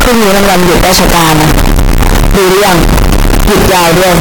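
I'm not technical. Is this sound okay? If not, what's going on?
No. The speech is buried under very loud, harsh, buzzing distortion from start to finish, and even the quiet gaps between phrases are as loud as the talking. This is most likely a signed and unsigned mix-up: the samples, which fit 16-bit audio, were read in the wrong number format. Every time the waveform passes through silence, the sound snaps from one extreme to the other, turning gentle detail into a constant crackling roar.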